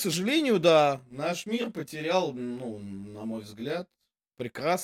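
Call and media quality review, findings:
Channel delay (comb filtering), 0.99 to 4.40 s. Speech turns rough and slightly doubled. Probable component is the stereo-to-mono downmix. One channel is around 20 ms late, so the summed signal cancels at evenly spaced frequencies, with the first notch near 20 Hz.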